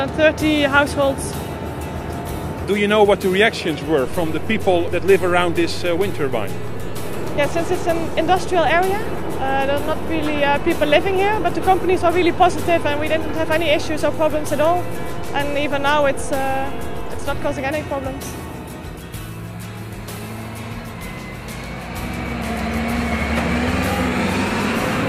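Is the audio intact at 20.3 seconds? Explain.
Yes, the audio is intact at 20.3 seconds, with no fault heard at that moment.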